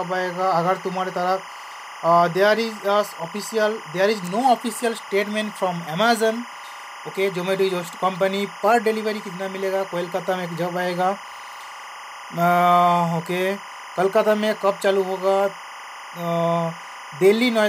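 Linear timecode running at 25 frames per second is leaking in from a neighbouring track or cable for the whole clip. This timecode bleed lays a steady chirping warble, flipping between tones near 1 and 2 kHz, roughly 15 dB under the sound.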